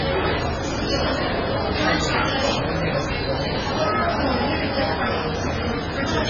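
From start to end the sound carries heavy damage of the kind MP3 compression leaves, likely from an encoder starved of bits. Nothing survives above 7 kHz, and the weaker parts of the spectrum flicker in and out, giving a watery, swirling texture with smeared onsets. A simple low-pass filter would dull the top the same way but stay steady. Here the warbling points to a very low bitrate, roughly 16 kbps.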